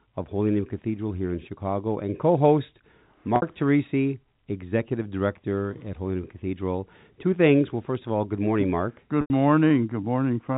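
Packet loss with pitch repetition at 3.36–3.42 s and 9.21–9.30 s: lost audio was patched by looping the last pitch cycle, shown as flat, repeating harmonics fading out, under a 4 kHz telephone band limit.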